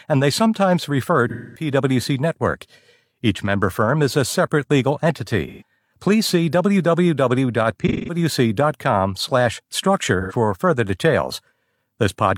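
AAC frame loss with concealment hits at 1.29–1.70 s after "and they sometimes refer", 5.47–5.63 s after "is a separate legal", 7.80–8.18 s and 10.21–10.33 s. The decoder rebuilds the missing frames from the last good spectrum. Unlike a plain dropout's silent gap, each gap becomes a smeared, phasey patch.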